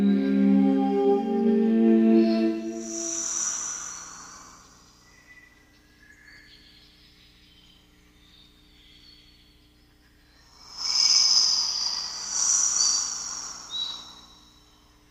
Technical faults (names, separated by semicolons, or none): none